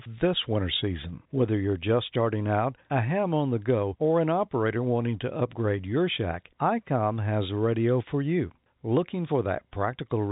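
No faults found; the speech carries the expected character of G.711 telephone coding, with nothing above 4 kHz.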